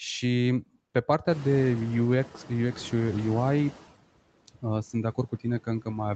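Speech, with noise suppressor artifacts running through the whole clip. The suppressor pulls down the bands it judges to be steady noise, frame by frame, by about 17 dB. So the background sinks in the pauses and swells back under the speech. The noise suppressor catching up shows from 1.29 to 3.83 s. Around 1.5 s the room noise jumps by roughly 18 dB. The suppressor's noise estimate trails that jump. For a while the louder noise passes with only about 11 dB of reduction. It then sinks as the estimate adapts over about 2.5 s. The clip passed through call processing, and nothing is heard above 8 kHz. That limit fits a wideband Opus call path at around 20 kbps.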